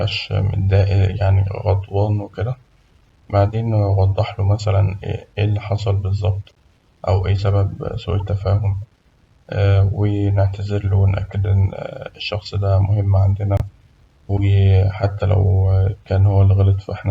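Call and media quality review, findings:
Corrupt frame decoded: short chirp-like blips at 6.49–6.51 s (after "له مثلاً اللي حصل", before "أو إيه"), 8.20 s, and 13.57–13.62 s (after "إن الشخص ده مهم"). Speech decoder played bit-damaged frames, so misread gains and codes put energy at wrong frequencies for roughly one to two frames each.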